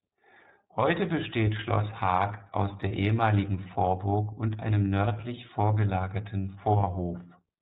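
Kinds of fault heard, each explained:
iLBC codec: The whole recording passes through a narrowband VoIP codec that codes each 30 ms frame on its own. Nothing above 4 kHz survives, and the speech comes through clear but plainly rough and synthetic, which fits a rate around 13 kbps.
Lost iLBC frames: At 2.88 s one 30 ms frame drops out. The decoder fills it by repeating the last pitch cycle mixed with noise, heard as a brief held, slightly buzzy vowel. Because frames stand alone, the speech recovers almost immediately.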